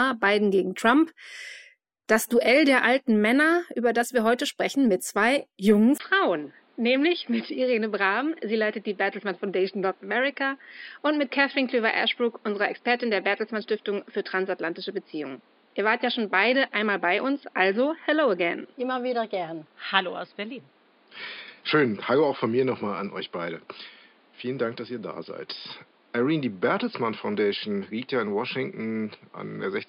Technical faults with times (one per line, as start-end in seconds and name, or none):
5.98-29.88 input switched to a poorer device